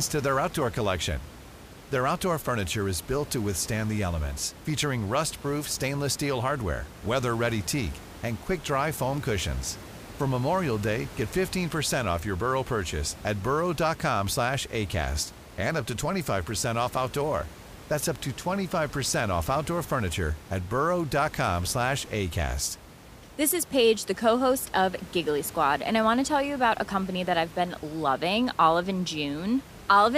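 Nothing goes wrong anywhere in the speech here, and the only thing in the background is the ordinary noise of the room, sitting about 18 dB below the talking.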